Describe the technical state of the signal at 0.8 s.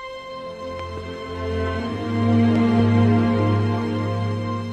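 At 0.8 s a loud pop sits on the signal, two sharp hits between 0.79 and 1.0 s, peaking about 5 dB above the sound. A voltage step, likely from a plug, switch or static, is added and shaped downstream. Unlike a dropout, the sound continues underneath.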